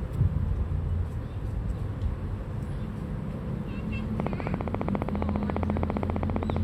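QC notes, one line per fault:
4.20 to 6.58 s: train of clicks. Regular ticks at 14.8 per second, about forty, peaking roughly 20 dB above the sound. Likely interference or a faulty connection.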